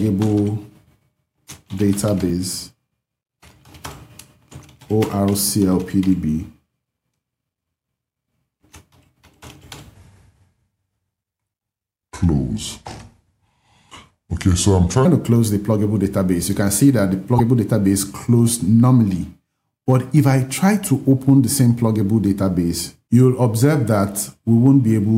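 The audio has a section at the wrong speed from 9.94 to 15.05 s. It plays at 0.761 times its recorded rate. Pitch falls with it, roughly five semitones, so the sound turns deep and slow. The likely cause is playback or editing against the wrong clock. Damaged data in the compressed stream follows at 17.36 to 17.41 s. The decoder misreads the corrupt frames and loses sync. It then hunts for the next valid frame header. The result is a brief glitch.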